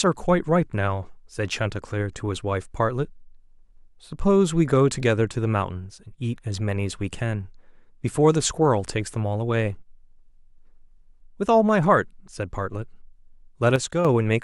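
Near the end, from 13.76 to 14.05 s, the speech abruptly sinks by about 6 dB for roughly 0.29 s, then snaps back to its earlier level. The edges are sudden steps rather than a fade. This is likely one channel dropping out. With one side of the stereo pair gone, the mono sum keeps only half of whatever both channels shared, which gives the 6 dB fall. Anything present solely on the lost side vanishes for that stretch.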